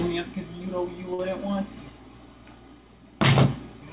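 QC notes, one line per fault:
1.14–1.31 s, short stall from a late packet: a packet arrived after its playout time, the jitter buffer ran dry, and the receiver stretched the last sound for about 44 ms until it came in. Playback then resumed at the same point, so nothing is lost, but one sound is held too long with a slight buzz or dip. Everything after lands about 44 ms late. The narrow call band, nothing above 4 kHz, fits G.711 A-law.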